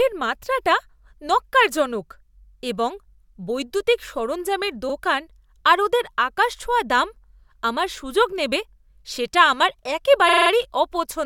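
Speech with two stutters from repeated frames: a brief 43 ms jolt at 4.88 s, then a longer judder from 10.28 to 10.50 s where a 43 ms block, fitting two compressed frames, replays five extra times, lengthening the audio by about 213 ms.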